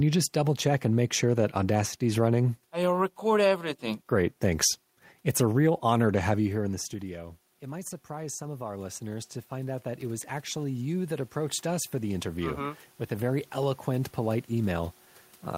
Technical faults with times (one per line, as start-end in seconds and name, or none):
6.49-14.96 automatic gain rising